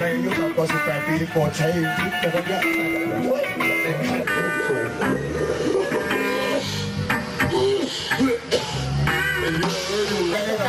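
From 2.72 to 2.96 s, loose connector crackle: a worn contact chops the signal, leaving irregular spikes and pops in the waveform and scattered broadband vertical streaks on a spectrogram.

From 4.23 to 10.34 s, the audio runs at 0.805 times normal speed, sounding slower and about four semitones lower. This is likely a section at the wrong speed, with spectrogram harmonics shifted downward and events stretched in time.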